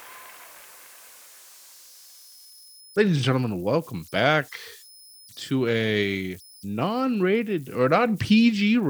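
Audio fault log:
Throughout: converter idle tones. A whistle sits near 5 kHz in the pauses between speech, and a grainy hiss clings to the speech, at about 28 dB below the signal. When the input to the delta-sigma converter is small and undithered, its modulator locks into repeating bit cycles. Those cycles form a steady tone rather than random noise, and the pitch follows the converter's small input offset.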